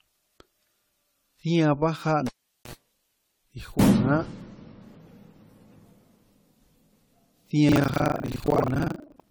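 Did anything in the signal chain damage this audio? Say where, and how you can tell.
Yes. Three stages left marks on this speech.

At the codec stage, the whole clip sounds swirly, smeared and hollow. Consonant attacks blur. That is worse than a single 64 kbit/s AAC-LC encode would give. The likely cause is generation loss from around ten decode and re-encode passes. Each pass quantises on a shifted frame grid, so noise and spectral holes pile up.

In the analogue wiring, a cable was pulled and plugged in from 2.27 to 2.73 s. A pop opens a gap of about 420 ms of near silence. Then comes a 56 ms burst of 60 Hz mains buzz, which is the plug tip touching before it seats fully. A second pop marks the signal's return. The buzz tells you the line was live during the reconnect.

At the driver or buffer stage, buffer tearing starts at 7.68 s and lasts to the end. A robotic 25 Hz rattle rides on the speech. 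It is present only while there is signal. That rate points to a period of about 40 ms. Roughly half of each buffer replays audio from around 70 ms earlier, with hard joins on both sides. The writing program and the hardware reader have slipped and now cross inside every period.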